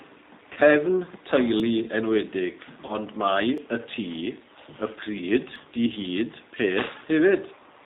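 The whole clip is marked by plainly audible G.729 codec damage. The sound fits the 8 kbit/s G.729A variant. This codec rebuilds speech from a filter model, a pitch predictor and a few pulses per frame. Nothing above 4 kHz survives. The speech sounds rough and faintly synthetic.

At 0.53 s comes VoIP packet loss concealed by the speech codec. About 30 ms of audio went missing, which fits a single lost packet. The decoder stretches its last pitch and filter into a fading buzzy tone or coloured noise until 0.58 s.

At 1.60 s there is a brief skip. Roughly a fiftieth of a second is gone, and the two sides join with no silence. This is likely audio missing between chunks, lost as the recording moves from one chunk to the next.

From 2.85 to 2.95 s the packet loss returns. Again 30 ms is lost. The concealment fades, and the sound stays weak or distorted after the stream resumes.

The same small skip recurs at 3.58 s and 5.56 s. 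With the one at 1.60 s, these skips fall about 2 s apart.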